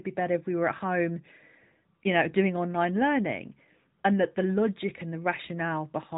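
From start to finish the speech has that AMR narrowband mobile codec sound: nothing above 3.8 kHz, plainly buzzy and synthetic, which fits a mid-rate mode around 10 kbps.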